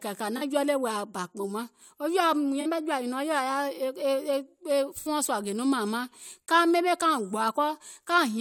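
AAC frame loss with concealment appears at 0.37–0.42 s, 2.61–2.66 s and 5.00–5.08 s, gaps of 43, 43 and 64 ms that fit two, two and three lost frames. The decoder patches each gap from the preceding spectrum, producing brief smeared, phasey spots in the speech.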